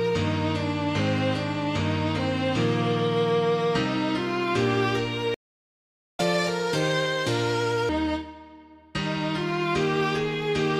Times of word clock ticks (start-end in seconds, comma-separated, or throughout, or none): none